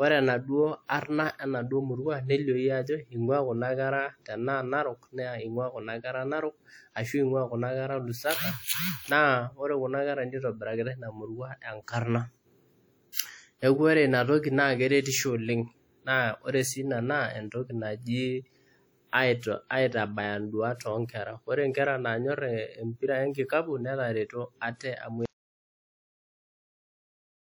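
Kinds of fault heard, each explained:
WMA compression: The whole clip carries plainly audible transform-codec damage, most likely from WMA encoding, at a level that fits a bitrate around 48 kbps. Quantisation noise spread over long transform blocks gives the speech a ringing, washy quality, with a hiss that rises and falls with the signal instead of sitting at a steady floor. Weak spectral lines are lost, thinning the texture, while content still extends up to about 20.1 kHz.
Pre-echo: At 13.12 to 13.17 s a short burst of hiss arrives ahead of a sharp attack, spread over about 48 ms. A transform codec shares its quantisation noise evenly across a block, so when a loud onset lands late in that block, noise scaled for the loud part also fills the quiet stretch before it. The hiss comes before the onset itself, and the attack sounds softened and smeared.
Audio dropout to silence: From 25.26 s to the end of the clip the speech cuts off mid-flow into complete silence, with no room tone or background noise left in the gap. 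The likely cause is that the input signal was lost, through a disconnected device, a failed link or a stray mute, while recording or encoding carried on writing silence. Whatever was said during those final seconds is gone, and the audio does not return.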